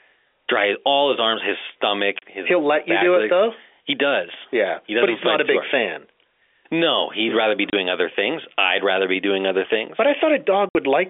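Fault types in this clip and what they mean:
Packet loss filled with silence: Parts of the speech stream never arrived, and the receiver played dead silence in their place. The speech drops out three times: 2.19 to 2.22 s and 7.70 to 7.73 s, each 30 ms, then 10.69 to 10.75 s, lasting 60 ms. Each hole starts and stops abruptly. The gap lengths fit runs of 10 ms packets lost on this telephone-band G.711 line.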